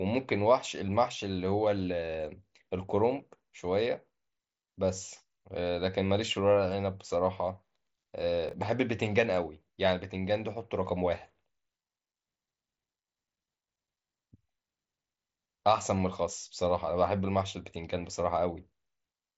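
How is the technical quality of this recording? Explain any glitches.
The recording has one glitch, heard over mSBC Bluetooth headset coding, which leaves nothing above about 7.7 kHz and a light graininess. At 8.49 to 8.53 s, chunks out of order: a 21 ms block plays one chunk late, causing a brief jumbled moment. The waveform shows three hard joins, and the spectrogram shows thin vertical streaks.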